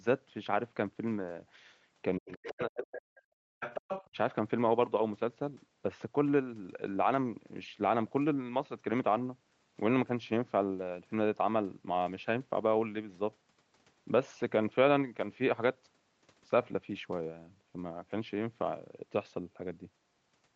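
From 2.18 to 3.6 s the echo canceller likely hit double talk: both sides spoke at once, it could not tell the near talker from loudspeaker echo, and it pulled the microphone signal down hard. The result is speech suppressed in double talk. The talker's speech sinks by as much as about 40 dB across roughly one and a half seconds. The same suppression returns briefly from 4.08 to 4.17 s, a dip of about 35 dB lasting under a tenth of a second.

Inside and after that first stretch, the canceller likely failed to fully remove the far end played through the talker's loudspeaker, so the other side's voice leaks through. Scraps of a second voice appear at 2.29 to 2.63 s and 2.84 to 3.0 s, about 15 dB below the speech. A longer, stronger stretch follows from 3.6 to 4.08 s, only about 10 dB down. These leaks sit within the 8 kHz band limit of the Opus call path.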